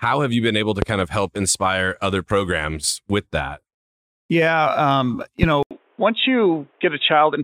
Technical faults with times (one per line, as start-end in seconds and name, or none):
0.82-0.85 loud pop
5.43-5.46 loud pop
5.63-7.43 input switched to a poorer device